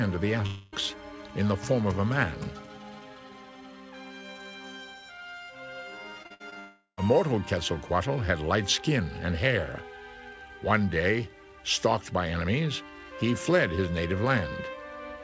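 From 0.46 to 0.74 s the sound smears into a fading buzz. This is a long network dropout, likely from about 0.26 s of audio never arriving. It is one unbroken gap, not a run of short holes.

From 6.22 to 6.58 s there is repeated packet loss, with a robotic sound. Five short holes, the longest 59 ms, are each patched by repeating the last sound. About 43% of this stretch is patch, so it sounds choppy.

Straight after that, from 6.60 to 6.99 s, comes a second long network dropout, likely from about 0.38 s of lost audio. A fading buzz decays into about 0.1 s of silence before the sound resumes. The G.722 call path's cut-off above 8 kHz stays constant throughout.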